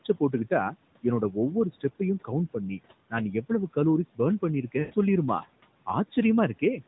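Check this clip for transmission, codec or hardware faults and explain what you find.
One fault: lost AMR speech frames, from 4.80 to 4.95 s. Corrupted frames made the decoder repeat earlier speech parameters with falling gain, so the sound stretches and fades over 120 ms, not cutting abruptly to silence.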